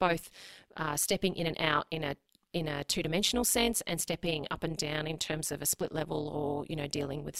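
From start to finish, the speech passes through a framing stage whose overlap-add reconstruction is faulty: the windowed frames are rejoined with an overlap that fails to sum to a constant gain. The result is overlap-add ripple, a level that swings by about 11 dB once per frame, at around 200 Hz. At that rate the dips fuse into a metallic buzz with extra tones laid over every syllable, giving the voice a robotic edge.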